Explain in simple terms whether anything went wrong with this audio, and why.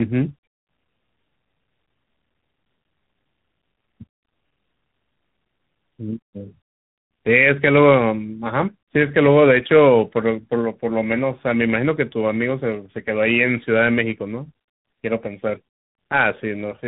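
Something did go wrong, and it runs through the whole clip from start to finish: tandem speech coding. The call seems to have passed through two separate speech-squeezing systems, one after the other, with a plain phone link in between. Each one decoded the speech and re-coded it, working on an already roughened copy. That's why the speech sounds rougher and a bit warbly, and nothing comes through above about 3.8 kHz, so it feels muffled.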